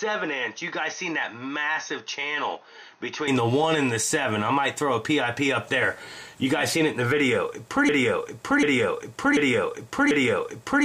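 From the start until 3.28 s, the sound is dull and slightly quieter, with nothing above 6.5 kHz and a faint extra noise floor. The likely cause is the input switched to a poorer device, and it clears abruptly at 3.28 s with no gap.

From 7.89 s to the end, a broken-record loop repeats one 0.74 s fragment four times. A stalled stream likely resent its last piece, and the audio meant for that time is lost.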